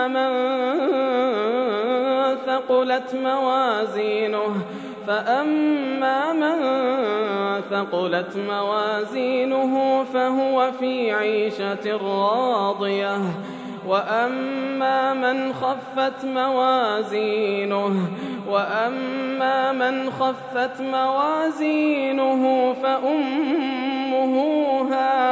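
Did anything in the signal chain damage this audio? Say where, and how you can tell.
No, nothing in the signal chain audibly damaged this audio, and its level, continuity and frequency content stay intact throughout the recording.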